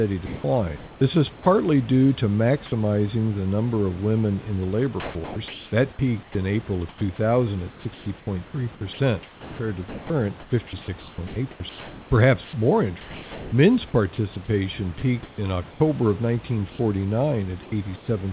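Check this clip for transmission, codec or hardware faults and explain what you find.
Three kinds of voice-detector trouble show up here, all riding on a narrowband call path that stops at 4 kHz, consistent with G.711 A-law.

Comfort noise in place of the background: from 0.26 to 1.46 s, 16.70 to 16.79 s and 17.63 to 18.08 s, the real room hiss turns flat and featureless, likely because the sender paused transmission and the receiver filled in synthetic noise.

Sound dropped by the voice detector: at 1.34 to 1.46 s, just before "due to maximizing the", and at 17.63 to 17.72 s, a few tens of milliseconds of sound vanish into steady noise, likely from the detector mistaking them for background.

Sound chopped by the voice detector: from 5.0 to 15.8 s, after "women in the labor", the detector likely kept toggling, swapping about 3.7 s of sound for fill, so it sounds choppy.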